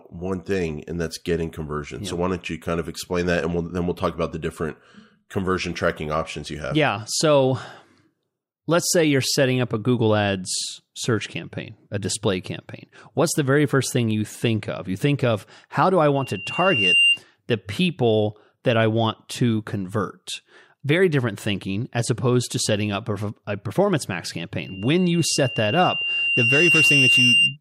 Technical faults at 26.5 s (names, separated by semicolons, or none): loudspeaker feedback squeal